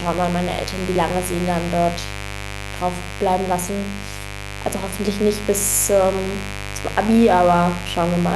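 Throughout, sharp switching spikes from the 50 Hz mains, arriving twice per cycle, leak into the speech path, producing a raspy mains buzz only around 10 dB below the speech.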